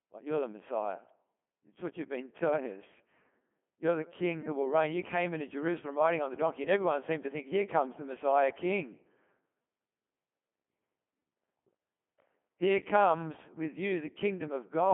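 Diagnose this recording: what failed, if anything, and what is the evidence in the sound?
Speech sounds robotic and buzzy throughout, band-limited to about 150 Hz to 3.4 kHz with nothing above 3.5 kHz. This is the Codec 2 vocoder at the codec stage. Only pitch, voicing, energy and envelope survive, resynthesised from sine waves, which fits about 2.4 kbit/s.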